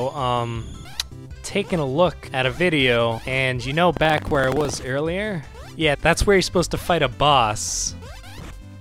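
From 3.93 to 4.76 s, buffer tearing splices stale audio into every period: a 23.4 Hz rattle, fitting a 2048-sample buffer, sounding only with signal, unlike gaps.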